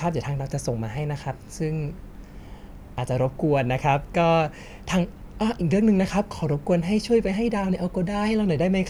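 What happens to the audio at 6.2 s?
Nothing goes wrong at 6.2 s: the speech carries on intact through that moment, with no dropout, click, distortion or other fault.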